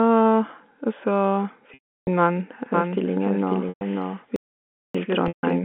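At 1.74 s the speech stops flowing and a buzzy, held tone briefly takes its place, with the gap lasting until 2.07 s. This is packet loss with pitch repetition. About 330 ms of audio never arrived. The receiver filled the hole by looping the last pitch period. That loop fades within roughly 50 ms, so most of this gap sinks into silence before the speech cross-fades back in.

From 2.74 s to the end, the speech is heard twice. This is a doubled audio track. A second full-band copy trails the first by about half a second and sits roughly 5 dB lower. It has no reverb tail or room colour. It starts abruptly. The likely cause is a second capture path running slower, or an edit that left two copies out of step.

At 3.69 s a shorter packet loss with pitch repetition lasts 120 ms, to 3.81 s. It sounds like a brief, slightly buzzy held note. Then the speech resumes.

From 4.36 s to 4.95 s the audio drops out to silence for 584 ms. 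The cut is sudden and the gap is silent, with no room tone at all. Whatever was said there is gone. The likely cause is a lost input, such as a disconnected device, a failed link or a stray mute, while silence kept being written.

At 5.28 s a third packet loss with pitch repetition runs for 150 ms, to 5.43 s. Again a short, buzzy repeated tone bridges the gap. All of this sits on a G.711 telephone line, whose 200 to 3500 Hz band leaves the speech narrow and without its upper range.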